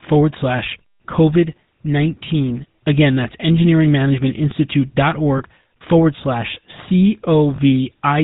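GSM full-rate codec throughout the 8-second speech: the vocal tract is modelled and driven by sparse regular pulses, cutting everything above 4 kHz and leaving a plainly audible buzzy, gravelly roughness.

Lost GSM frames at 5.38 to 5.42 s and 7.56 to 7.59 s: each gap, about one 20 ms frame, is filled by repeating the previous frame's settings, heard as a brief rough, metallic ring.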